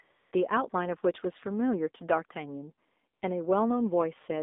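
From start to finish the speech comes through the AMR narrowband mobile codec, held within a band of roughly 250 Hz to 3.7 kHz. With nothing above 3.7 kHz, sibilants are dull and thin. The voice has a plainly buzzy, synthetic edge, which fits a low AMR-NB mode around 7.4 kbps. A plain telephone band-limit would sound muffled but still natural; this coarse, pulse-driven quality points to the vocal-tract model underneath, not just filtering.

AMR comfort noise fills gaps at 0.02 to 0.10 s, 0.12 to 0.32 s, 0.70 to 0.72 s and 3.14 to 3.22 s. In each, the line judged the talker silent, speech frames stopped, and the receiver substituted smooth, steady synthetic noise built from a rough level and spectrum estimate. It differs from a dropout or packet-loss gap because the pause never goes dead. Instead, flat noise switches in and out, replacing the real background.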